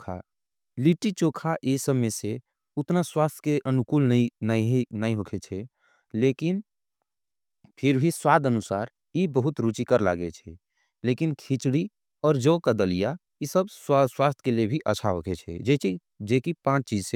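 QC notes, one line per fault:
No faults to note for this speech clip.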